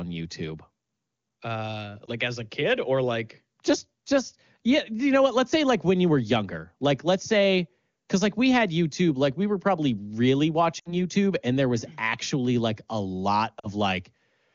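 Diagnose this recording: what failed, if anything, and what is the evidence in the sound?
Speech warbles briefly at 2.06–2.10 s, then drops to near silence at 10.80–10.93 s and 13.59–13.69 s before returning rough. These are lost AMR speech frames on the radio link. The gaps fit one, three and two 20 ms frames, concealed by repeating the last pitch and vocal tract settings at falling gain.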